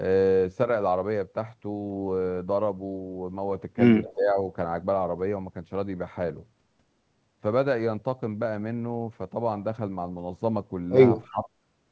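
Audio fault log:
4.15–4.37 s and 11.29–11.53 s, speech suppressed in double talk: the speech sinks for about 0.2 s each time, by roughly 15 dB and then a deeper 25 dB. The likely cause is an echo canceller that, unable to separate near-end speech from loudspeaker echo, attenuates both.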